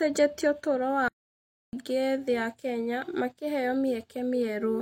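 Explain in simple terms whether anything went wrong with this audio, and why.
Playback stall from 1.08 to 1.73 s: the speech goes silent much longer than a brief dropout, then resumes where it stopped, likely because the player ran out of data.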